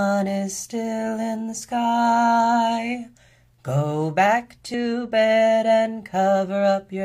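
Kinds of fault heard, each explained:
Damaged data in a compressed stream: corrupted bytes make the decoder misread frames and resync, heard as a single short glitch at 4.74 s.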